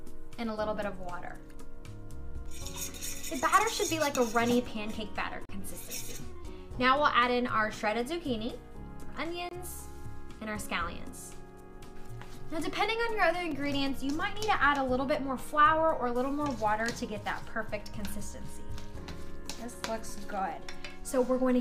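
Gaps between stream segments, roughly every 4 s, where segment timestamps fail to meet, leave hard-edged silent holes of about 37 ms at 5.45 s, 23 ms at 9.49 s and 4 ms at 13.51 s, interrupting the audio without losing any of it.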